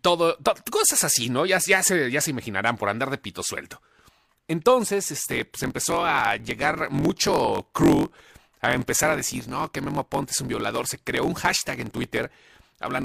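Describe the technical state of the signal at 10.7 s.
At 10.7 s the speech is inside a block size mismatch (truncated), running from 5.22 s to the end. Each block loses its tail because the reader takes less than the writer sends. A 45.9 Hz buzz results. Speech runs 1.07 times fast, timbre unchanged, consistent with 1024-sample written blocks.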